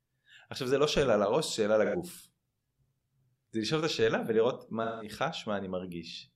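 At 1.84 s the speech smears into a brief noisy, phasey patch for about 85 ms, which fits a couple of AAC frames going missing. That's AAC frame loss with concealment: the decoder papers over the gap by reusing the last good spectrum with shuffled phase. It happens again from 4.83 to 5.11 s, where roughly 170 ms of sound points to about four lost frames, so the smeared stretch is longer.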